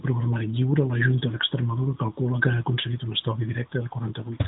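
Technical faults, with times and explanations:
No technical faults are heard; the sound comes through the AMR narrowband mobile codec as expected, with nothing above about 3.8 kHz.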